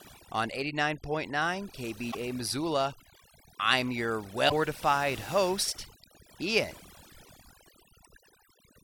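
A noise reduction stage set far too aggressively runs through the whole recording. It cuts individual frequency bands whenever they sit near its noise estimate, taking quiet parts of the speech with them. The result is overdone noise removal: a lowered background broken up into twinkling specks.

Damaged data in the compressed stream then corrupts three short stretches, at 2.08–2.15 s, 4.46–4.53 s just after "I'm your", and 6.70–6.77 s. Each time the decoder misreads the broken frames and loses sync, producing a brief squawk or blip of about 70 ms.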